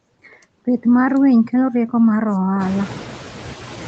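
Noise suppressor artifacts run through the whole clip. The suppressor lowers steady noise by only about 4 dB per frame, and room noise rises around 2.5 s.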